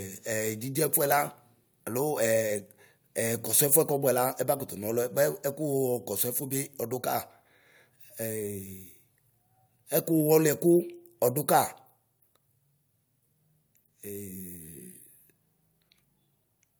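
No technical faults can be heard anywhere in the recording.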